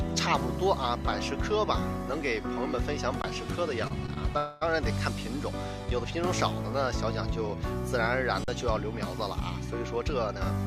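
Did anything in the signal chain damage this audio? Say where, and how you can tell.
Yes. The output buffer ran dry twice, an underrun with held sample. At 3.22 s the waveform freezes flat for 20 ms, and at 8.44 s for 40 ms. The converter held its last value. About that much live audio was lost each time.

A short stall from a late packet occurs twice on the network side. At 3.87 s a sound is held 29 ms too long, and at 4.06 s by 16 ms. The jitter buffer stretched it until the packet arrived. Nothing is missing, only a slight buzz or dip.

At 4.37 s a call audio freeze follows. For 238 ms the last sound continues as a fading buzz or hiss without reaching silence. Then the audio resumes where it stopped, with nothing lost. The likely cause is packets delayed in transit emptying the jitter buffer.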